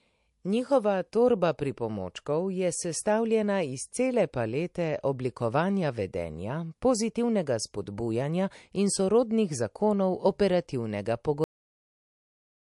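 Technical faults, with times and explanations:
Throughout, MP3 compression: the speech sounds watery and swirly, with nothing above 11.3 kHz and a smeared, chirpy edge on sibilants. This likely comes from a low-bitrate MP3 encode, around 48 kbps, which cuts the treble and drops weak frequency lines frame by frame.
11.44 s, cut-off end: the speech stops abruptly mid-sound and falls straight into digital silence with no natural decay. The final stretch of audio was never written out, so playback ends at that point instead of letting the sound finish.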